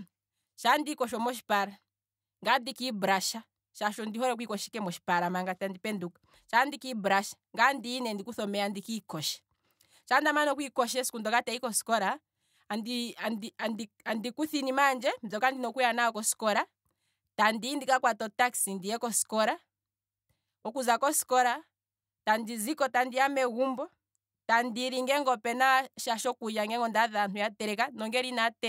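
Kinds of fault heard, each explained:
Nothing in the speech stood out as a technical fault on listening.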